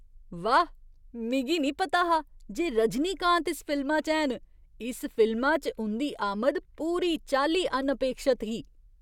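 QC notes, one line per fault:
No technical faults are heard in the speech signal, which stays continuous and stable at a consistent level throughout.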